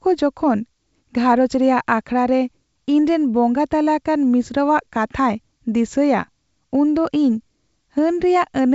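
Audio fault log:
No faults were found in this speech; it is carried by G.722 wideband telephone coding at 64 kbit/s, which keeps its usual band up to about 7 kHz and leaves only faint coding traces, if any can be heard.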